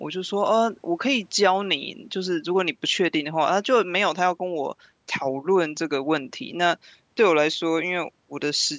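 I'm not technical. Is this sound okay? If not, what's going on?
Yes, nothing stood out as a problem when listening to this speech clip.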